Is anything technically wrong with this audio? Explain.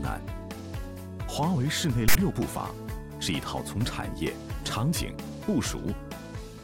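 Yes. At 2.08 s the file tags are played as audio. For about 70 ms, to 2.15 s, a block of text metadata is read as if it were sample data. Text bytes sit in a narrow range of values, so they decode to a loud rasp pushed off to one side of centre. It arrives as a harsh burst of static with abrupt edges, then stops just as suddenly.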